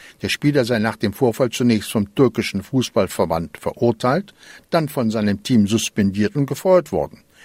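No technical faults are audible.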